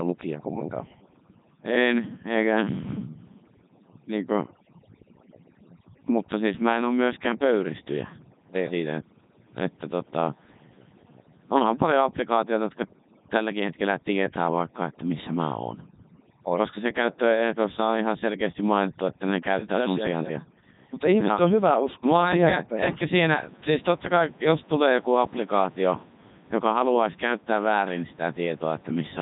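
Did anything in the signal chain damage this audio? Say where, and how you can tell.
Yes, at the codec stage, for the whole clip: this is Codec 2 vocoder damage. The speech is robotic and buzzy, nothing comes through above 3.8 kHz, and the room noise, about 26 dB down, gets mangled too. The decoder rebuilds the voice from sine waves using only pitch, voicing, energy and a spectral envelope, and the quality fits its top 3.2 kbit/s mode.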